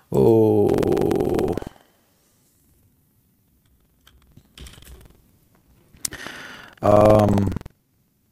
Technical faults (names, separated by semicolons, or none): buffer tearing